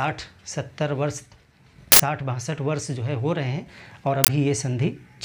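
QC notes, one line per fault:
1.92–2.00 s and 4.24–4.28 s, uninitialised buffer: 80 ms and 40 ms blocks played unfilled, leftover memory bursting as loud noise, seen as dense waveform slabs and broadband spectrogram columns.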